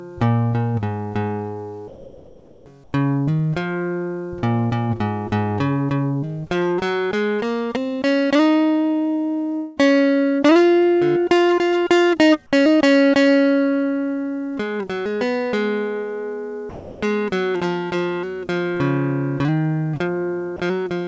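Comfort noise in place of the background occurs from 1.88 to 2.66 s and again from 2.84 to 2.93 s. In these quiet gaps in the music, where the background sits about 26 dB and about 33 dB below the loud passages, the real ambience gives way to a flat, featureless hiss, about 4 dB and about 7 dB quieter respectively. The likely cause is the sender's voice detector halting transmission during the lull, leaving the receiver to synthesise a rough stand-in for the background until the music resumes.

A long network dropout follows from 9.56 to 9.79 s. About 210 ms of audio never arrives, and the receiver bridges almost all of it by stretching the last sound it had into a fading, buzzy smear rather than leaving a silent hole. The music then picks up later in the passage, with the lost stretch simply missing. This is likely packets lost or arriving too late for the jitter buffer.

Sound dropped by the voice detector appears from 16.69 to 17.02 s and briefly at 20.56 to 20.59 s. 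In the first case, roughly 280 ms of quiet musical material is cut and replaced with steady noise. In the second, a 30 ms sliver vanishes the same way. The likely cause is the detector misjudging soft music as background and stopping transmission until the level rose again. Throughout, the call codec passes nothing above 8 kHz, which fits G.722.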